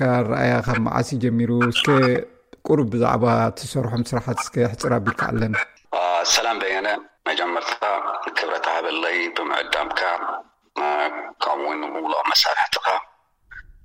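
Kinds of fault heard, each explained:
DC step: The signal's zero reference jumps abruptly, as if a converter recalibrated or an input carrying a DC offset was switched into the path. Here it happens twice, at 0.68 s and 5.39 s, each time by about -21 dBFS. The offset then drains away over a few tens of milliseconds, which fits a high-pass near 5 Hz. Each jump is heard as a brief low thump while the audio carries on unchanged.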